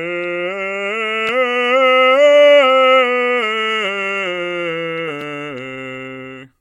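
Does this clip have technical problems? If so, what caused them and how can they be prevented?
Yes: small forward jumps in the music at 1.29 s and 5.21 s, likely dropped buffers (overrun), each skipping about 10 ms unread. Prevent this with larger buffers and higher-priority audio threads.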